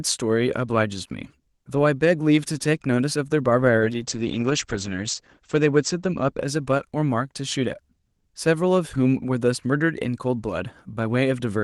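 A call bitrate drop runs from 3.81 to 6.97 s of this speech: the encoder is starved of bits, with the coarsest stretch lasting 1.35 s. The top end narrows from 12 kHz to 8 kHz, and the sound turns muffled and rough, which fits Opus falling from 32 to about 11 kbps.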